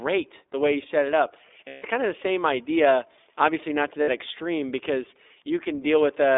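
The whole clip carries the iLBC codec. Audio sits between 250 Hz and 3.6 kHz, sounding rough and synthetic. Its character fits 15.2 kbps with 20 ms frames.

Lost iLBC frames occur at 1.68 to 1.87 s, 4.02 to 4.09 s and 5.64 to 5.68 s. Each gap becomes a held, buzzy vowel from a repeated pitch cycle. The voice is right again almost at once.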